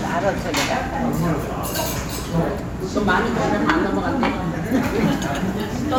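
Nothing in the recording stood out as a technical problem on listening.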